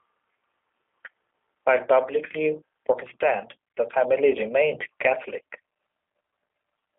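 From start to finish the speech sounds thin, rough and faintly synthetic, with nothing above 3.5 kHz. This is the G.729 codec, which fits 8 kbit/s G.729A: each 10 ms frame is rebuilt from a vocal tract model, pitch prediction and sparse pulses.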